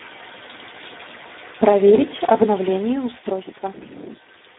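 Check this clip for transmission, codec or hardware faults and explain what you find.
One codec fault runs through the whole speech clip: Speex codec damage, heavy throughout. Speex rebuilds speech from a few excitation bits at a low setting, which fits about 8 kbps. The result sounds hoarse and noisy, confined to a 250 Hz to 3.7 kHz band. A spectrogram shows smeared, grainy harmonics and nothing above 3.8 kHz.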